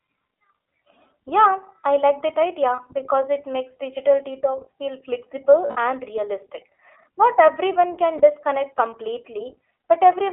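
iLBC codec throughout the speech: each 20 ms frame is coded independently and the band is limited to about 300 Hz to 3.4 kHz, giving a plainly audible rough, synthetic edge, which fits the 15.2 kbps mode.

Lost iLBC frames at 2.76 to 2.80 s, after "I like that" and before "because it makes digital"; at 5.66 to 5.77 s, before "and realistic"; and at 8.18 to 8.22 s, after "everyone can". The decoder fills each gap by repeating the last pitch cycle mixed with noise, heard as a brief buzzy, held vowel. The middle gap runs about 100 ms and fades, and the voice recovers immediately afterwards.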